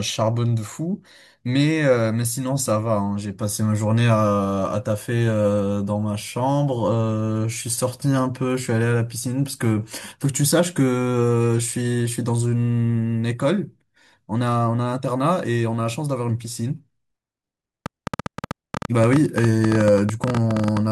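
A train of clicks runs from 17.86 to 20.78 s: some forty similar pulses at an uneven pace, averaging 11.7 per second and peaking about 15 dB above the speech. It is heard as erratic ticking, in pauses too, likely interference from nearby equipment or a faulty connection or power supply.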